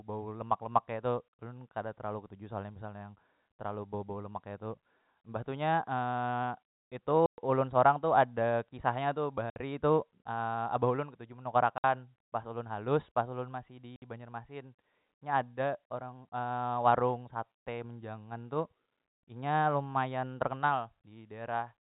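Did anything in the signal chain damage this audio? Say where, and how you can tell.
Yes, in the network: packet loss filled with silence. There are hard-edged holes at 7.26 to 7.38 s (120 ms, before "ulun sorang tu ada"), 9.50 to 9.56 s, 11.78 to 11.84 s (after "abah ulun ketuju menukar"), and 13.96 to 14.02 s (60 ms each). The gaps are exact multiples of 20 ms, which fits 20 ms packets. They are dead silence rather than smeared or concealed audio, which rules out a codec glitch.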